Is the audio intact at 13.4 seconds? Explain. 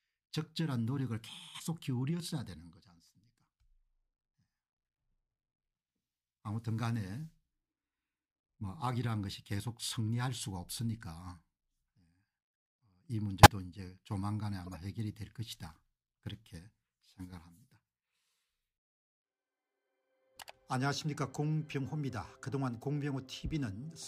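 No. From 13.43 to 13.46 s a corrupt frame was decoded: flipped bits in a single compressed frame sent energy to the wrong frequencies, producing a loud, brief chirp, squeak, blip or burst of noise. Unlike a dropout, it mostly adds wrong sound rather than losing or muting it.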